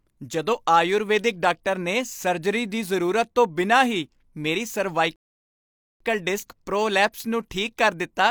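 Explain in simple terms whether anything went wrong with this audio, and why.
At 5.16 s the speech halts in a rebuffering stall, silent until 6.00 s, then picks up exactly where it stopped. Unlike a dropout, nothing is skipped; the player waited for more audio.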